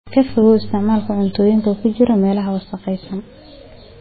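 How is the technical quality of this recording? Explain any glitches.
Poor, because heavy compression damage runs through the whole speech recording. Likely MP3 compression, throughout: starved of bits, the encoder cut everything above 4.5 kHz and let weak frequency lines flicker, leaving dull, watery, swirly speech that fits a bitrate near 16 kbps.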